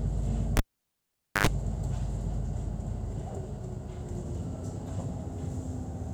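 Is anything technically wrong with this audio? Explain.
Yes. From 0.57 s to 1.47 s a cable is pulled and plugged in while the signal is live. A pop marks the break, then about 0.85 s of near silence, then roughly 90 ms of 50 Hz mains buzz as only the plug tip touches and the unshielded contact picks up hum, and a second pop as the sound returns. That brief hum burst and the paired pops distinguish it from a simple digital dropout.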